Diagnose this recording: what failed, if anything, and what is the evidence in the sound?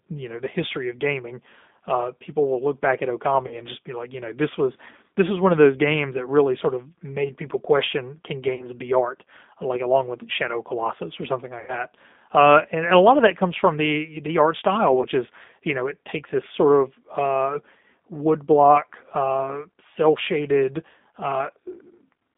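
At the codec stage, the speech runs through G.729 at 8 kbit/s throughout. The line is confined to roughly 200 Hz to 3.6 kHz, and the rough, synthetic texture of the pulse-excited reconstruction is plainly audible across the whole clip.

At the network stage, there is VoIP packet loss concealed by the speech codec at 3.47–3.60 s, 8.55–8.66 s, 11.60–11.81 s and 15.01–15.07 s. About 40, 40, 80 and 20 ms of audio are missing, which fits 20 ms packets. The decoder extends the last frame with falling gain, and recovery lags after each gap.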